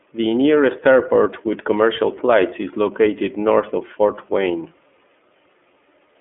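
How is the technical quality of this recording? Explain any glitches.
The technical quality is limited: the speech has passed through an iLBC codec for the whole clip, and its damage is plainly audible.

Throughout all 6 seconds, the low-rate iLBC codec rebuilds each block of speech on its own, with no carry-over from the previous one. The roughness fits 30 ms frames and a 13.33 kbps mode. The line band runs from 250 Hz to 3.4 kHz, with nothing above 3.8 kHz, so the speech sounds thin and muffled, with a grainy, slightly synthetic edge.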